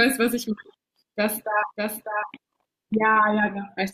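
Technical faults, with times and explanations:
1.19–2.95 s, doubled audio track: a second full-band copy of the speech trails the original by roughly 0.7 s at about 5 dB lower. It has no decay or room colour and switches in and out abruptly, likely from a slower second capture path being mixed back in.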